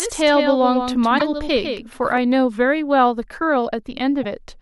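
From the very start until 2.18 s the speech has a second copy of itself trailing behind, a flat, dry echo around 150 ms late and a few decibels quieter, with no room decay. At 2.18 s it cuts out abruptly. This is a doubled audio track, most likely from the same signal being captured a second time through a slower path, or from an edit that left two copies out of step.

From 1.16 to 1.22 s, while that echo is still present, a short glitch breaks through, and a similar one follows from 4.19 to 4.25 s. Both come from damaged data in a compressed stream. The bytes there were corrupted, so the decoder misread those frames, lost sync and searched for the next frame header, leaving a brief glitch.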